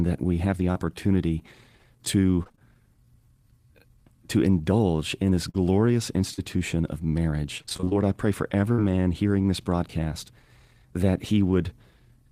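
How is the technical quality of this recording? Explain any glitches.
The recording is speech degraded by network packet loss, with six glitches in three kinds.

Three brief smears or wobbles come from short concealed packet loss: at 0.71 s just after "that we have the", at 5.50 s after "to indulge in this", and at 6.34 s. Each time about 40 ms of audio failed to arrive, and the receiver covered the hole by extending the preceding sound before blending back in.

Two choppy, robotic passages are repeated packet loss (robotic sound), from 2.43 to 2.62 s and from 7.58 to 7.95 s, the second ending just before "I pray for". Dropouts came in quick succession, each up to about 22 ms, so nearly half of each stretch is patched guesswork with fragments missing.

At 8.72 s a held buzz or fading hiss lasts about 60 ms, then speech jumps ahead. This is a burst of packet loss. Consecutive data went missing, and the decoder sustained the last sound while lowering its level until real audio resumed.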